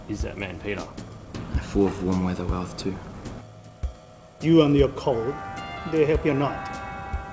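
Throughout, there is clock drift between sender and receiver: the sender's clock runs about 5 percent fast, so the receiver's jitter buffer keeps filling. From 0.67 s to 7.16 s, repeated timing corrections trim short pieces to keep pace, giving uneven hiccups and a tempo near 104 percent, over a G.722 call path with nothing above 8 kHz.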